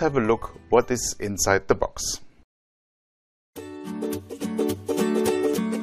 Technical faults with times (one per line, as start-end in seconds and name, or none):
2.50-3.33 rebuffering stall